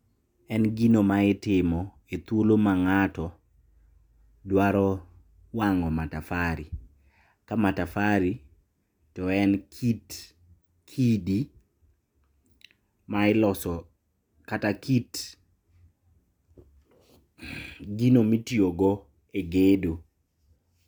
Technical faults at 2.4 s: none

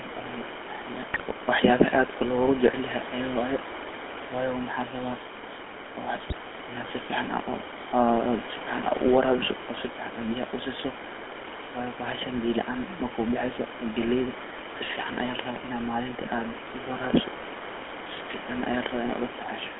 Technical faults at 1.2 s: GSM full-rate codec; GSM bit errors

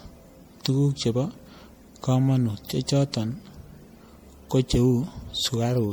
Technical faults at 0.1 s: generation loss

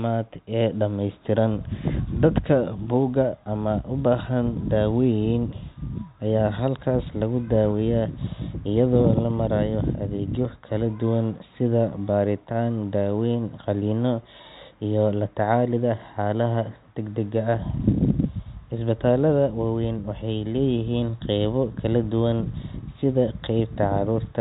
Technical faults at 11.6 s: none

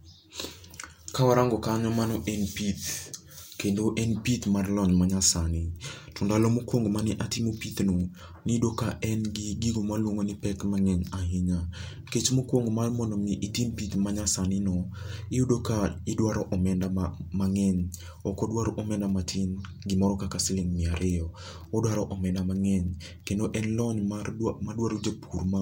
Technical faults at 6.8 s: none

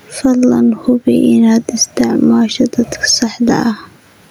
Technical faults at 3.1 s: gain pumping

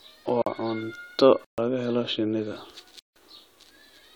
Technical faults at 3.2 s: block of digital silence

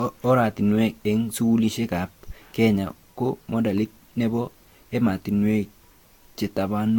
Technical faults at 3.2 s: generation loss

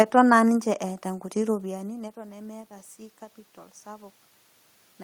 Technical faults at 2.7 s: automatic gain rising

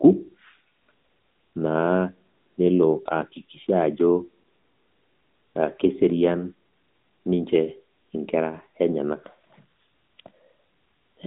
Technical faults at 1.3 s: AMR narrowband mobile codec

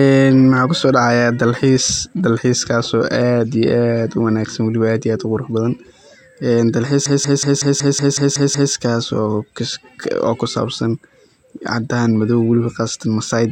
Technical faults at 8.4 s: system hang loop

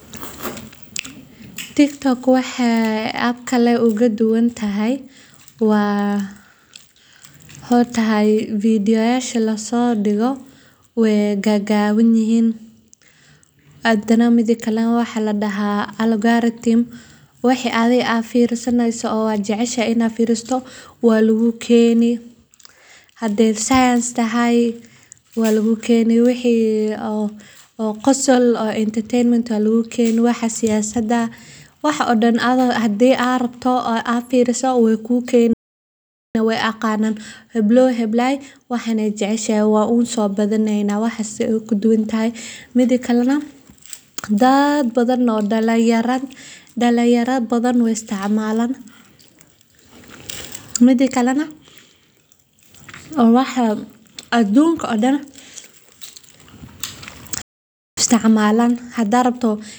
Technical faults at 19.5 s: none

